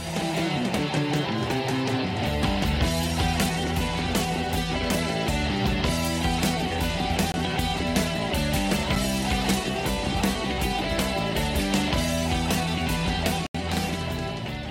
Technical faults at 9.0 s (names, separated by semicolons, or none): block of digital silence